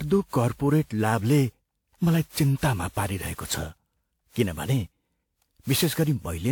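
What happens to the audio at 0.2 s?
At 0.2 s the speech sounds swirly, smeared and hollow, as it does throughout, which points to generation loss, likely from about ten lossy re-encodes, fitting WMA at 128 kbit/s.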